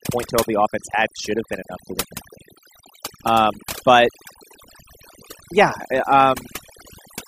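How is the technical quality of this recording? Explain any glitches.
From start to finish, the gaps between phrases drop to near silence dotted with twinkling specks. That is overdone noise removal: an over-aggressive noise reducer cut each frequency band it judged close to the noise floor, taking quieter voice detail along with the noise.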